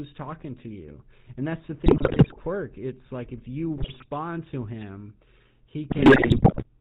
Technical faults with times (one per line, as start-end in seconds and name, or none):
0.00-6.80 GSM full-rate codec
1.86-2.37 GSM bit errors
3.76-4.05 GSM bit errors
5.90-6.64 GSM bit errors